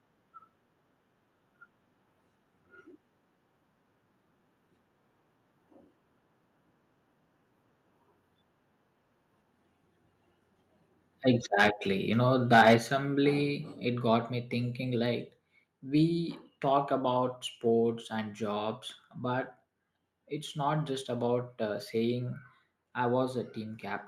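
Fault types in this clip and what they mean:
Microphone overload: A harsh, crackling edge appears on the loudest moments, first briefly from 11.59 to 11.68 s and then more heavily from 12.52 to 12.75 s. The peaks overshoot by about 7 dB and then about 9 dB, so their tops are sheared flat, touching about 7 percent of samples at worst. The likely cause is an input volume set so high that peaks hit the converter's ceiling. Unlike codec grit, the distortion follows only the loud peaks and disappears between them.
Microphone volume stepped down: At 12.78 s, just after the second distorted peak, the sound and its background fall together by about 6 dB in a single instant step. This points to the call software likely reacting to the overload by lowering the device's input volume. A fade would ramp down gradually, and noise suppression would mostly thin the background. Here both drop at once by the same amount, with no slope, right after the clipping.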